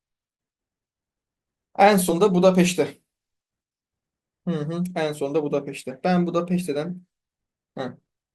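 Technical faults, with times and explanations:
2.09 s, compressed frames skipped: the audio lurches forward by roughly two frames, around 40 ms, which fits a codec working in 20 ms frames whose data was missing or rejected as damaged. Unlike a dropout there is no silent gap, and the sound simply resumes slightly further along than it should.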